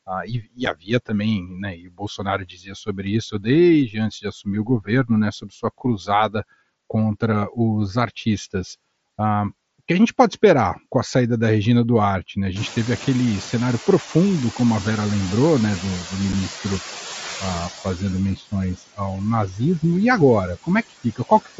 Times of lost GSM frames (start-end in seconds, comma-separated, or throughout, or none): none